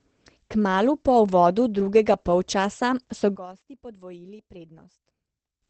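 A speech recording runs throughout with heavy Opus compression as the likely cause. It sounds muffled and hoarse, with nothing above 8.5 kHz. That points to the codec's SILK speech mode at a low rate, around 12 kbps, rather than MP3. There is little swirling or watery warble from spectral holes, mostly a dull, rasping voice band. A plain low-pass filter would also cut the top but would not add this rough, coarse texture. From 3.36 s to 5.62 s, right after "uvodu drugega polčasa so", the sound collapses to a faint residue about 21 dB quieter. One channel inverted in polarity is the likely cause: in mono the centred voice cancels against itself and only the small difference between channels remains. This is not a dropout or a muting. A weak ghost of the speech continues through the whole span instead of true silence, and full level returns only at the end.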